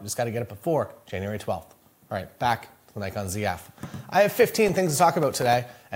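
From 4.67 s to 5.53 s, a burst of processor overload crackle tears through the audio. The processing could not keep up, so it missed a run of buffer deadlines in quick succession. Each missed buffer left a brief hole of silence with abrupt edges. The gaps are tiny, which fits buffers of around a millisecond and a half. Roughly fifteen of them cluster together. They sound like gritty crackling riding on the sound, and the crackling clears once the overload ends.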